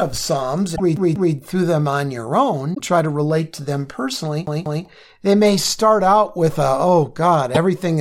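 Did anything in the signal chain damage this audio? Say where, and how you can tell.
Yes. Short glitches break into the speech at 0.72–0.80 s, just before "through them on your"; at 2.73–2.80 s, between "through them on your" and "try to relate to"; and at 7.54–7.57 s. This is damaged data in a compressed stream: the decoder misreads corrupted frames at the codec stage, loses sync and jumps ahead to the next frame header.

A fast, even stutter repeats the same 0.19 s fragment twice, with a brief mute at each jump, at 0.97–1.35 s and again at 4.46–4.85 s, between "relate to them personally" and "they may start out". It is a CD stuck on one turn at the playback stage: a scratch throws the laser back one track on every revolution.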